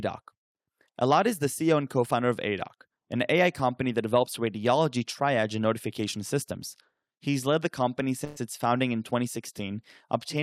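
A speech clip where, from 8.24 to 8.37 s, the last sound is held and fades before jumping ahead: a burst of packet loss concealing about 120 ms of missing audio.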